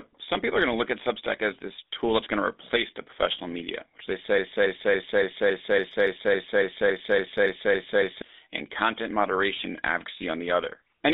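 Throughout, the speech carries GSM full-rate codec damage: a buzzy, gravelly roughness from pulse-excited vocal-tract modelling, consistent with the 13 kbps full-rate codec. The band is confined to about 250 Hz to 3.7 kHz, so the sound is thin and telephone-like.

From 4.38 to 8.22 s, after "professional media which they", a broken-record loop repeats a 280 ms fragment back to back about 14 times before "and content moderation" resumes. The audio that belonged in that span is gone. The likely cause is a stalled player or stream resending its last buffer.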